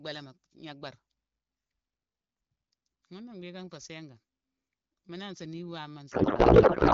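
A codec payload misread hits from 6.11 s to the end: octet-aligned AMR frames parsed as bandwidth-efficient, so fields land wrong and the clear AMR-WB speech collapses into garbled noise and warble.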